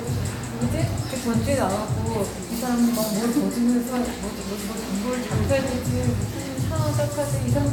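No technical faults can be heard anywhere in this recording of sounds. There is nothing in it that needs a timestamp or an explanation.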